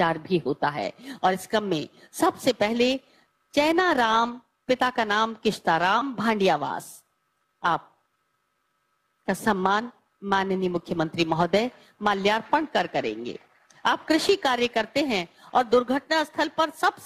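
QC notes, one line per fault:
0.82–17.05 s, periodic clock jitter. From just under a second in, a rough, metallic edge sits on the sound and stays to the end. The converter's sampling clock is being shaken at one steady rate, around 3 kHz. That timing wobble modulates every component, adding sidebands above and below each one at that spacing. Higher frequencies move more per timing error, so the brighter content picks up the harshest grit. In silence the edge disappears.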